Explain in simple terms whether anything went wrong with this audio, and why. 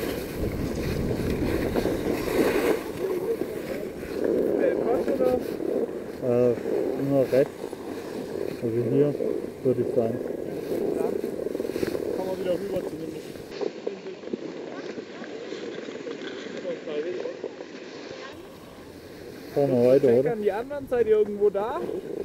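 From 13.51 to 18.33 s the input likely switched to a poorer device: the sound turns duller with nothing above 7.6 kHz, shifts in level, and carries different background noise.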